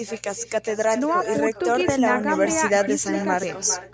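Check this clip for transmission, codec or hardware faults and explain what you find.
One fault runs through the whole recording: an echo with no canceller. Each phrase of the speech is followed by a fainter, hollow repeat, roughly four tenths of a second behind and about 11 dB quieter. This happens when the far end plays the call through a loudspeaker and its microphone picks that sound up again. With no echo canceller to subtract it, the returning copy makes the network round trip and lands back on the line, shadowing every phrase. The call microphone processing is working as expected, and nothing comes through above 8 kHz.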